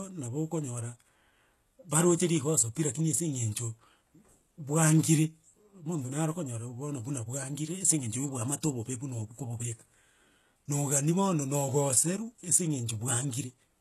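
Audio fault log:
Throughout, HE-AAC compression: the speech has heavy codec damage and nothing above about 12.3 kHz, with a treble that sounds false. Only the lower spectrum is coded, and the top band is rebuilt by copying lower bands upward under a coarse envelope. Harmonics therefore fail to line up across the crossover, and s sounds turn gritty, metallic or lispy. This is likely HE-AAC v2, at a very low rate that fits about 16 kbps.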